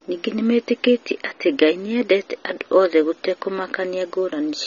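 From start to finish the speech sounds dull and warbly, with nothing above about 6.9 kHz. That's likely AAC compression at a low bitrate, roughly 24 kbps.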